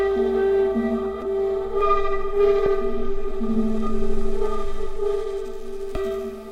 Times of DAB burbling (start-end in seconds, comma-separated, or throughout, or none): 1.05, 2.66